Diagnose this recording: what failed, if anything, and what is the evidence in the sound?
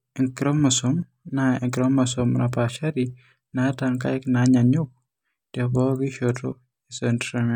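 Nothing failed; no faults heard.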